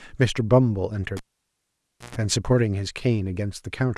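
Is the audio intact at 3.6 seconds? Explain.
Yes, the audio is intact at 3.6 seconds, with no audible fault at that moment.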